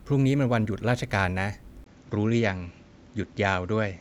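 At 1.84 s the input likely switched to a poorer device. After a 20 ms gap the speech continues to the end through a narrower band, with nothing above 7.6 kHz. It sounds duller, at about the same level, over faint new noise roughly 40 dB down.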